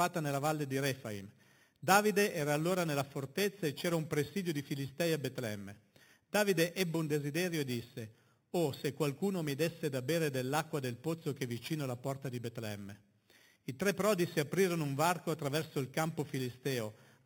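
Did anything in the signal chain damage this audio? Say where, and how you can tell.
Yes. The damage is at sample-rate conversion: imaging from sample-and-hold upsampling. Throughout the speech, a metallic fizz about 14 dB below the signal tracks its level. Each 8 kHz sample was repeated six times to reach 48 kHz without smoothing, so the waveform shows staircase steps. On a spectrogram, a mirrored copy fills 4 to 8 kHz, with harmonics sloping opposite to the pitch.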